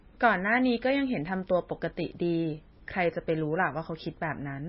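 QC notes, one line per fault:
Throughout: MP3 compression, likely at a very low bitrate around 18 kbps. Treble is cut above 5.6 kHz, and weak bands flicker between frames, making the speech watery and swirly.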